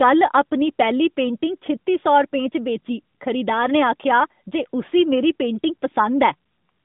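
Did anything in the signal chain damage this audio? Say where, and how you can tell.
No, nothing in the signal chain damaged this audio.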